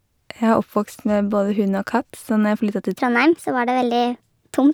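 From 2.96 s to the end, there's a section at the wrong speed: the speech runs 1.29 times fast, about four semitones high, likely from a clock mismatch.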